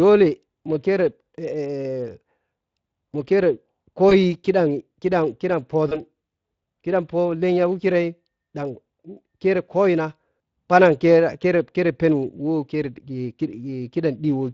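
Throughout the speech, the Speex codec leaves a hoarse, grainy roughness on every syllable, a degree of damage at about 20.6 kbps. The CELP coder has too few bits to model the excitation, so the grit follows the voice itself rather than sitting underneath it as steady background hiss.

At 4.09 to 4.13 s, and again at 5.89 to 6.04 s, VoIP packet loss concealed by the speech codec produces a brief smear. Each event sounds like a single lost 20 ms packet. The decoder repeats its last pitch and filter at falling gain, and the second event stays weak for well after the gap. That lingering recovery, rather than an abrupt silence or click, sets it apart from a plain dropout.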